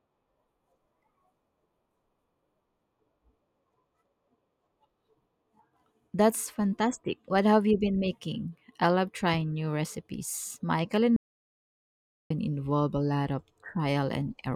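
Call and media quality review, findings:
Audio dropout to silence, 11.16 to 12.30 s (about 1.14 s). Speech cuts out mid-flow to silence, no room tone, resumes at "involve a lot of". Likely cause: input lost upstream, recorder kept writing silence; content in gap unrecoverable.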